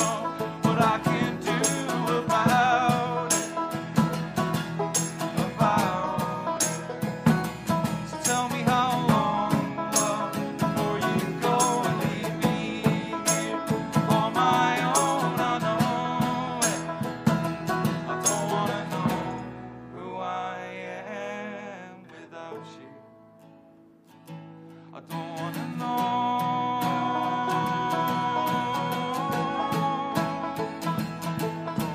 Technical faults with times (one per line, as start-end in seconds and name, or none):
none